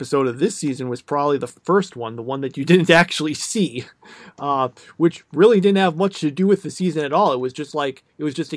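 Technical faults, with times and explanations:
No technical faults can be heard anywhere in this speech recording, and the signal holds steady with nothing breaking into it at any point.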